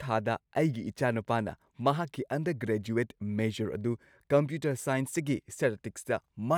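Speech, with no technical faults audible anywhere.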